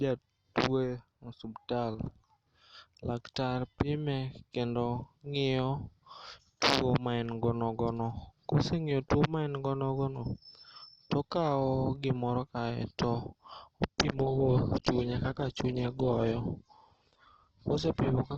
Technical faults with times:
13.92-18.37 adaptive stream at a lower bitrate

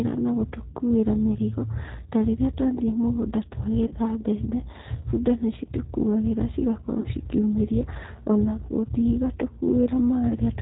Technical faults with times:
0.00-10.62 G.729 codec
3.87-3.96 VoIP packet loss concealed by the speech codec
7.00-7.07 VoIP packet loss concealed by the speech codec
10.29-10.36 VoIP packet loss concealed by the speech codec

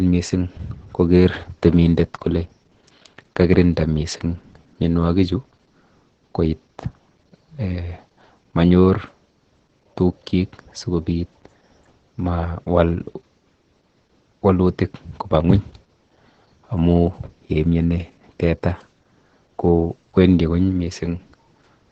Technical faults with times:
0.00-21.92 Opus voice compression

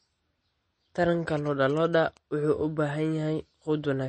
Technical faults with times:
0.00-4.09 MP3 compression
1.37-2.17 GSM signalling bursts

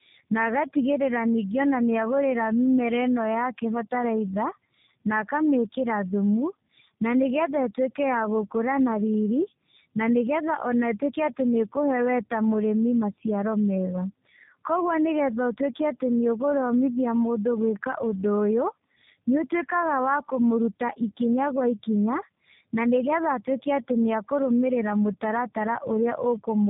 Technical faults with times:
0.00-26.70 tandem speech coding

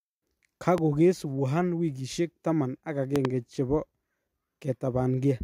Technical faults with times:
0.78-0.80 loud pop
3.16-3.27 loud pop

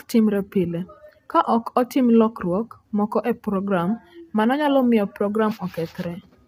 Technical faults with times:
0.00-6.47 low-delay AAC compression

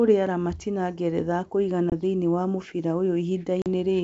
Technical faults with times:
1.90-1.93 packet loss on an ADPCM call
3.62-3.67 packet loss on an ADPCM call

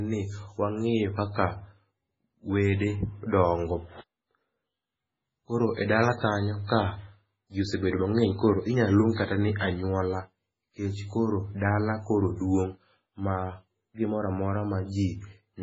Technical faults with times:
0.00-15.63 MP3 compression

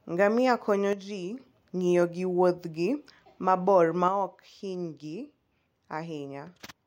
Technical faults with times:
0.93-1.40 one channel drops out
4.08-6.86 one channel drops out

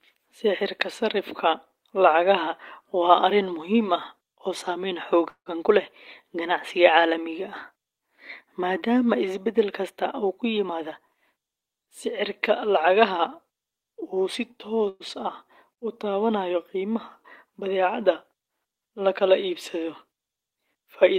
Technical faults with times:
5.29-5.48 call audio freeze
10.67-13.16 jitter buffer speed-up
14.89-15.02 call audio freeze
20.51-21.15 jitter buffer speed-up

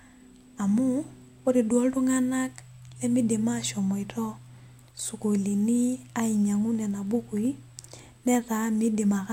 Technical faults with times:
6.15-9.25 periodic USB or driver dropouts

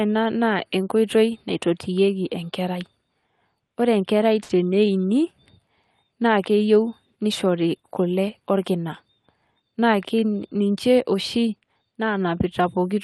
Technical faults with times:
4.43-4.51 short stall from a late packet
9.56-10.32 jitter buffer speed-up

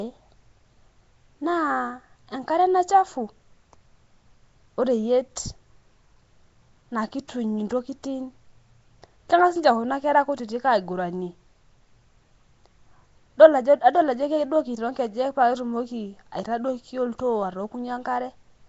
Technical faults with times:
0.00-18.68 Nellymoser compression

